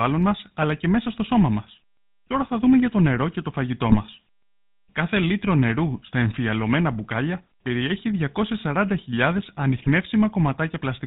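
From start to end the speech has a buzzy, gravelly roughness with nothing above 4 kHz: the GSM full-rate codec, at what sounds like its 13 kbps rate, rebuilding the voice from coarse pulse excitation. From 3.86 to 3.97 s, right after "το νερό και το", and again from 9.76 to 9.89 s, the voice breaks into brief squawks and gargling. These are GSM bit errors, where corrupted filter, pitch and gain values distort a few frames.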